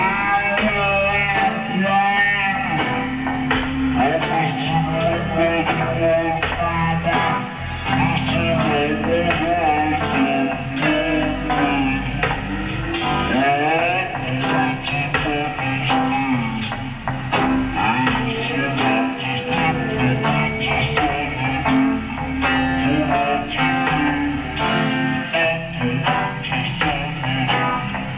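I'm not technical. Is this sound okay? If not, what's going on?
No. The whole clip plays at half its proper speed, and everything sounds a full octave lower than it should. This is a wrong sample rate fault. The audio is being played back too slowly, which fits a 16 kHz recording played at 8 kHz.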